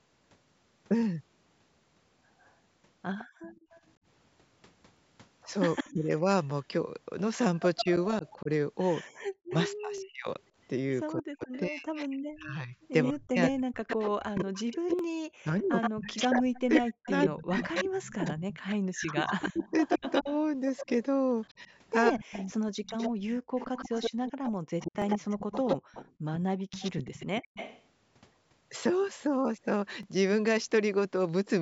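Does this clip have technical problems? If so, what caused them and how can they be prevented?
Yes. An echo leak is heard at 2.40 to 3.81 s, 5.75 to 5.91 s, and 7.77 to 27.83 s. A delayed copy trails the talker by 157 ms, later 120 ms, at about 25, 5 and 10 dB below the speech. The likely cause is a far-end loudspeaker whose echo canceller let residue through. A headset on that side, or better echo cancellation, prevents it.

The background is gated by the echo canceller at 3.25 to 3.72 s, 23.41 to 23.54 s, and 25.78 to 26.24 s. The room sound drops by up to about 40 dB, then returns. The canceller clamped the microphone hard while the loudspeaker played. Softer suppression with comfort noise would prevent these holes.

Overlapping chunks cause short stutters at 4.97, 9.98, 14.99, 20.01, 25.02 and 30.03 s. Each join repeats about 13 ms of audio. They fall every 5 s, which fits 5-second processing chunks that start before the last one ends. 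Trimming the overlap, or crossfading it, prevents this.

Speech is suppressed in double talk at 5.89 to 6.25 s, with a dip of about 25 dB. It happens again across 7.82 to 23.13 s, where the voice keeps dipping by up to about 40 dB, roughly 7 s in total. The likely cause is an echo canceller that cannot separate the talker from the loudspeaker echo. Tuning its double-talk detection, or using headsets, prevents it.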